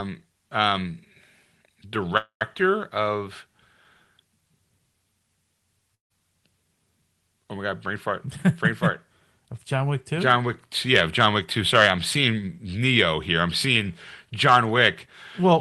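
Speech carried over a call link with a 12 kHz audio bandwidth has two timing faults. At 2.17 to 2.43 s there is a call audio freeze, likely caused by delayed packets draining the jitter buffer. The sound stalls into a fading fill and then about 0.11 s of silence, then resumes with nothing lost but everything after it about 0.23 s later. At 5.95 to 6.12 s a long network dropout, likely caused by packets never arriving, leaves a fading fill and then about 0.14 s of silence. When the speech returns, about 0.16 s of it is missing.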